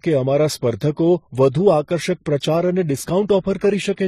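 Transcoding between lossy codecs affects the whole speech clip: nothing sounds above 14.9 kHz, and two layers of codec artefacts overlap, likely a low-rate HE-AAC encode re-encoded as MP3, fitting about 20 then 40 kbit/s.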